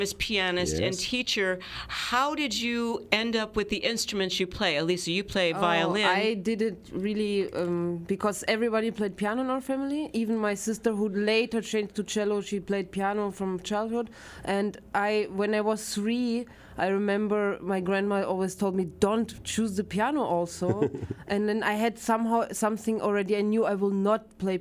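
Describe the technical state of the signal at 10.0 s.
At 10.0 s the signal is intact, with no audible fault at that moment.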